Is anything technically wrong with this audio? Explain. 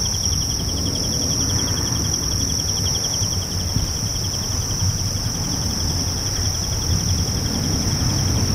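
No technical faults are audible.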